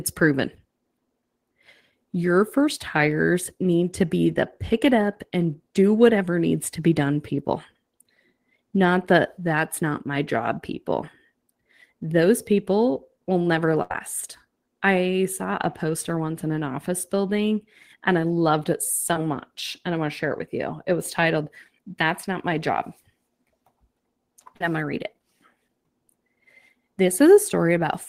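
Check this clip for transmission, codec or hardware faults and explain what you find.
The speech shows transmission faults: one burst of packet loss and two short concealed packet losses. Nothing points to codec or hardware trouble.

Burst of packet loss, 13.82 to 13.91 s, right after "people will never". A run of packets failed to arrive in time, so the receiver extended the last sound for about 75 ms while turning it down. That produces a stretched, fading tail instead of real audio. When the stream picks up again, about 70 ms of the original speech is gone, so the phrase jumps forward.

Short concealed packet loss at 19.13 to 19.16 s, just after "and I loved it", and at 24.56 to 24.61 s, just before "I'm going to read". Each time, a few hundredths of a second failed to reach the decoder in time. The receiver bridged the hole by continuing the preceding sound and then blending back, about 18 ms the first time and 38 ms the second. 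Both are heard as a brief smear or wobble in the speech.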